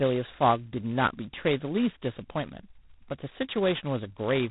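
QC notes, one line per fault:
Throughout: G.726 ADPCM. Nothing passes above 3.9 kHz. A harsh, rasping hiss tracks the speech level. This fits 16 kbit/s, two bits per sample.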